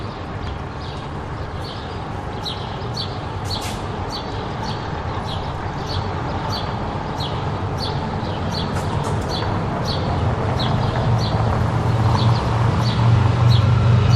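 The clip is a recording of sounds, and no technical fault can be heard in it. There is nothing to time or trace to a cause.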